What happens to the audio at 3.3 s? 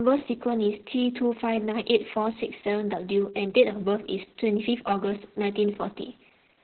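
Opus voice compression is present at 3.3 s and runs through the whole clip. The encoder is in its SILK linear-prediction mode at narrowband, so nothing survives above 4.2 kHz, and the excitation is coded very coarsely, which fits a bitrate of about 6 kbps with long frames. The speech sounds muffled and hoarse, with a slightly robotic edge and heavy codec damage.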